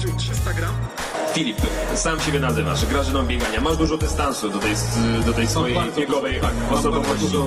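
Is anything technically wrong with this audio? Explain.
Yes. From 3.73 s to the end, there is an adaptive stream at a lower bitrate. A slower connection forced a leaner encoding, consistent with Opus at 16 kbit/s, which abruptly removes everything above 12.2 kHz with no gap.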